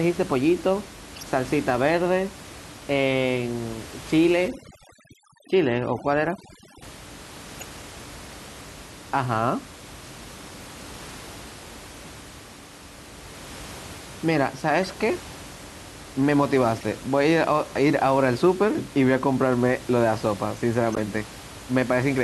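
At 1.15 to 1.23 s a corrupt frame was decoded. Flipped bits in the compressed data were played as if valid, so misread gains and codes put energy at the wrong frequencies for roughly three frames. It is heard as a short chirpy blip peaking near -25 dBFS. On a spectrogram it shows as a small vertical smear unrelated to the speech harmonics, and on the waveform as a brief jagged spike.

From 4.48 to 6.82 s the audio shows overdone noise removal. The room noise, about 19 dB below the speech, was cut far too hard. Frequency bands near the noise estimate were switched off along with the quieter parts of the voice, leaving near-silent gaps with twinkling specks. A spectrogram shows a patchy, speckled floor with isolated bright dots where the noise had been a smooth haze.

Corrupt frame bursts return at 7.55 s (four-ish frames, about -20 dBFS), 14.83 s (a single frame, about -25 dBFS), 16.81 s (about -25 dBFS) and 20.93 to 21.0 s. 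The last is the loudest, at about -10 dBFS, and shows as a clear waveform spike.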